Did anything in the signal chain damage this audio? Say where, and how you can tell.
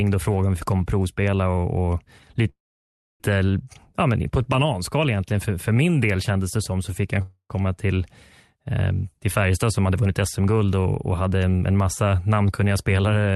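Yes. At the network and jitter-buffer stage, from 2.49 to 3.22 s, there is a call audio freeze. The last sound is stretched into a fading buzz, then about 0.63 s of silence. Speech resumes exactly where it stopped. Delayed packets likely emptied the buffer, inserting a 0.71 s gap.

A long network dropout runs from 7.22 to 7.52 s, after "så fick jag en" and before "komma till". A brief decaying fill gives way to silence. When audio returns, about 0.28 s of speech is gone. Lost packets likely caused this.

From 9.43 to 11.35 s, just before "en en massa namnkunniga", the jitter buffer speeds up. The talk sounds hurried at unchanged pitch, about 110% speed. Repeated pitch-period cuts remove roughly a fifth of a second to shrink built-up delay. The Opus call path limits the top end near 12 kHz.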